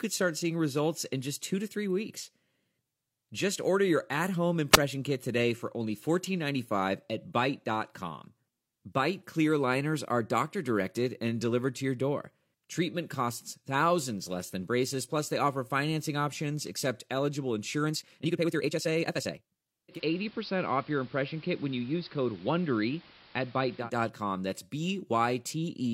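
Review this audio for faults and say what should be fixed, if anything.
Between 4.72 and 4.77 s, right after "order your at home", a brief puff of hiss swells up and the speech drops into a tiny hole of near silence, roughly 9 ms long, before it comes back on "kit today for only". That is a wireless microphone squelch dropout: the analogue FM link faded enough that the receiver's squelch briefly muted its output. Keep the receiver antennas in clear line of sight and close to the transmitter, with fresh batteries and a clean frequency.

From 17.81 to 19.69 s, just after "financing options accept eligible", the delivery suddenly lurches forward to about 1.79 times normal pace while the pitch stays put, and the speech turns rushed. This is a time-stretched section, likely software squeezing the passage to fit a slot by dropping short slices of audio while preserving pitch. Trim pauses or re-record to length rather than compressing a passage that hard.

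From 19.88 to 23.90 s, the sound loses its treble, a layer of hiss appears about 25 dB below the speech, and the level dips by about 1 dB. Both transitions are smooth cross-fades of about 119 ms. That is digital radio blending to analogue: the receiver lost its digital stream and faded over to the station's AM broadcast, then back. Capture the feed from a source with a solid digital signal, or disable analogue blending on the receiver.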